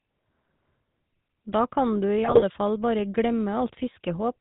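Speech, heard through the GSM full-rate codec for the whole clip. The damage is plainly audible. Everything above 4 kHz is gone. The voice turns buzzy and gravelly because the codec rebuilds it from a vocal-tract filter driven by sparse, regular pulses. The roughness fits the 13 kbps full-rate coder. From 2.24 to 2.43 s, GSM bit errors break the voice into squawks and gargling pops. Corrupted filter, pitch and gain values warp the spectrum and jolt the level. The burst fits roughly nine damaged frames at an error rate of a few percent.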